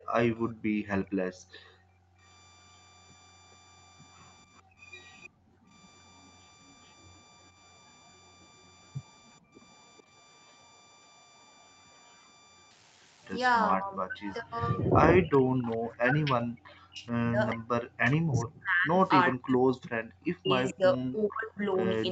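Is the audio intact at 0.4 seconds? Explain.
No. From 0.00 to 2.21 s the background is gated by the echo canceller: it ducks the microphone by up to about 40 dB while the far side plays, so the room sound vanishes rather than fading under noise. Between 0.36 and 0.53 s a faint, delayed copy of the speech sits roughly 430 ms behind, heard as a separate late repeat rather than reverberant smearing, likely an echo leak from an echo canceller that failed to remove the loudspeaker pickup. Converter idle tones run throughout at about −28 dB, a tone around 1 kHz from an undithered delta-sigma converter cycling through repeating bit patterns.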